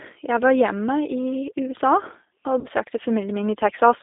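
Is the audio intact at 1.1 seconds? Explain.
No, at 1.1 seconds you're hearing G.729 codec damage, which runs through the whole clip. The speech is rebuilt from a vocal tract model and a few pulses per frame at what sounds like 8 kbit/s, squeezed into 300 Hz to 3.7 kHz, so it comes out muffled, rough and clearly synthetic.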